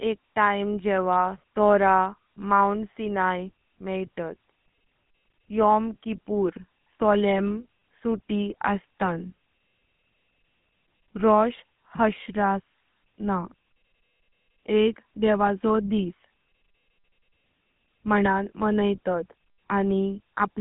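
Speech throughout the clip carries plainly audible GSM full-rate codec damage. The sound has the buzzy, gravelly roughness of a coder that models the vocal tract and excites it with a sparse, regular pulse train, which fits the original 13 kbit/s GSM full-rate codec. The band is also confined to telephone width, roughly 150 Hz to 3.5 kHz, so there is no low body and no high-frequency detail above that.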